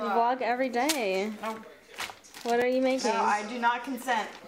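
A repeated buffer at 2.62 s: fresh audio arrived late, so a tiny chunk, which fits a 64-sample buffer, played twice, giving a brief click.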